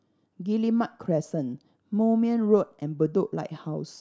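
No faults are audible anywhere in the recording; it runs without any dropout, glitch, click or distortion.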